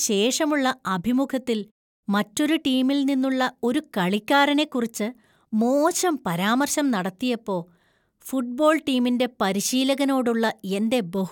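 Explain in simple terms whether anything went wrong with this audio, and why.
Listening through the speech recording, nothing stood out as having gone wrong.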